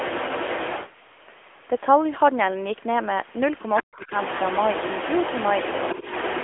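A speech recording that has passed through the AMR narrowband mobile codec for its whole length. Nothing reaches above about 3.7 kHz, the band sits roughly within 300 Hz to 3.4 kHz, and the low-bitrate vocal-tract model makes the voice plainly buzzy and synthetic, which fits a rate of around 10 kbps. A second voice runs underneath the main talker from 0.00 to 0.92 s and again from 4.01 s to the end, only slightly quieter than the main speech. This is likely the other side's voice leaking through: the far end's audio played on the loudspeaker and was picked up by the microphone without the echo canceller fully removing it.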